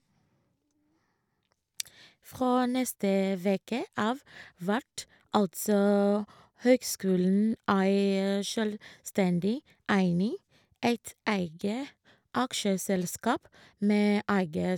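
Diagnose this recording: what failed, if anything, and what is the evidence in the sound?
Nothing seems to have gone wrong here: the speech runs along with no dropout, click, glitch or other damage to pin on any stage of the chain.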